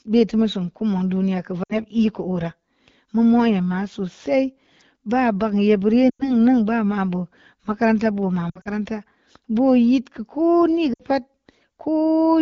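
At 1.63 to 1.72 s, just before "koo’ rə", the speech briefly smears and dips. This is lost AMR speech frames. The decoder had no valid data, so it repeated the last good pitch and vocal tract settings at falling gain. The same quick drop to near silence recurs at 6.10 to 6.31 s and 10.93 to 11.02 s. After "makaranta buma", at 8.50 to 8.69 s, it breaks up in scattered dropouts. The wideband coding at 12.65 kbit/s stays clear around these gaps.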